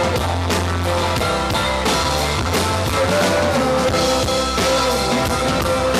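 No technical faults can be heard anywhere in the audio.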